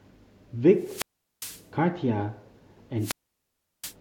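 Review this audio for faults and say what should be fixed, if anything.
Wireless microphone squelch dropout at 0.77–1.69 s and 2.98–3.95 s. The RF signal fades, and the receiver's squelch mutes the speech for 0.40 s, then 0.72 s. Prevent it by improving line of sight, antenna placement and frequency choice.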